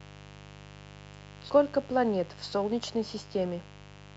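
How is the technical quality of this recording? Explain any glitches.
The recording is marred by a mains buzz running under the speech from start to finish, sitting roughly 20 dB below it. Its fundamental is 50 Hz, the European mains frequency. Sharp switching spikes from something like a dimmer or rectifier, or from an unshielded lead, get into the signal twice per cycle, and those narrow pulses carry harmonics of 50 Hz well up into the kilohertz range. That is why it sounds raspy and edgy rather than round. A plain mains hum would be a smooth, dull tone concentrated at 50 and 100 Hz. This buzz has a bright, gritty upper layer that a simple low-cut filter would not remove.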